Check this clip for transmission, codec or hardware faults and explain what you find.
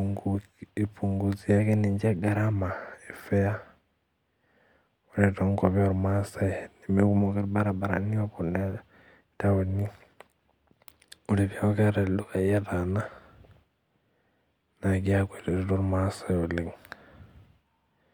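The speech shows one recurring fault, a drift correction step, heard three times: 1.60 to 2.53 s, 7.20 to 8.79 s, and 10.70 to 12.67 s. Each time the speech suddenly runs 5.9% fast and rises by 99 cents, nearly a semitone, then snaps back. The likely cause is clock-matching software stepping the playback rate to rebalance its buffer. Unlike wow or flutter, the shift is abrupt and fixed, not a smooth wobble.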